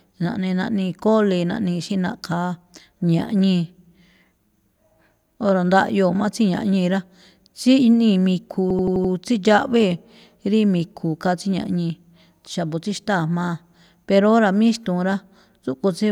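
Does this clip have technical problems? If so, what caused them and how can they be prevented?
Yes. A system hang loop runs from 8.70 to 9.13 s. One 85 ms slice of speech repeats five times, a stutter at about 11.7 Hz. The length fits a 4096-sample ring buffer replaying while the system froze. Prevent it by removing the stall with higher priority for the audio thread and a driver that mutes output on underrun.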